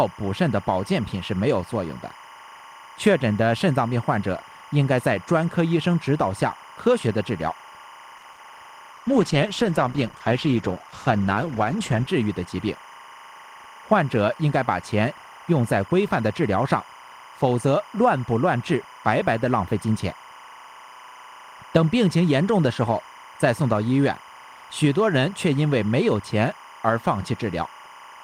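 Throughout, timecode bleed adds a chirping warble about 20 dB below the speech, switching near 1 and 2 kHz at 25 frames per second. On a spectrogram it shows as two faint, steady horizontal bands.

From 8.17 to 8.24 s, a short stall from a late packet holds the last sound for 50 ms while the buffer waits. The stall appears as a smeared, stretched patch.

Short concealed packet loss follows from 8.32 to 8.35 s and again from 8.35 to 8.51 s. Missing audio is replaced by extrapolated sound, heard as a brief smear or wobble. In the waveform the envelope flattens oddly.

A call bitrate drop from 8.94 to 12.14 s makes the speech rough and muffled, which fits a fall from about 32 to 13 kbps. On a spectrogram the high band is cut off abruptly.

From 12.07 to 12.53 s, a jitter buffer speed-up trims around 50 ms of pitch periods. Speech runs about 9% fast at unchanged pitch, and the waveform shows compressed syllable spacing.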